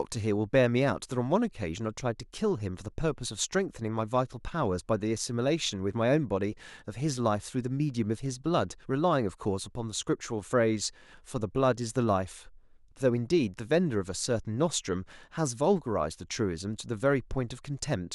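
No technical faults can be heard anywhere in the recording.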